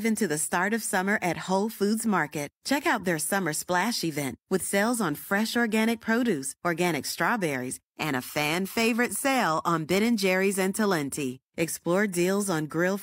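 Nothing to flag in this speech recording; there are no technical faults to point to anywhere along it.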